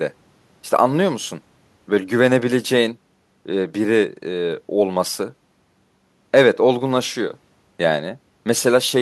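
Listening through this speech recording, nothing stood out as a technical problem.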